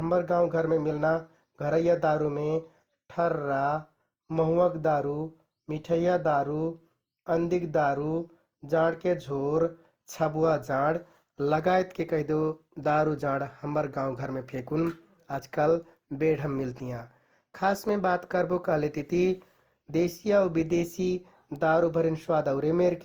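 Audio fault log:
Throughout, generation loss: the speech sounds swirly, smeared and hollow, with blurred consonant attacks and a grainy haze beyond what a single 48 kbit/s Opus pass would leave. This likely comes from roughly four successive lossy re-encodes, each requantising on a shifted frame grid so artefacts accumulate.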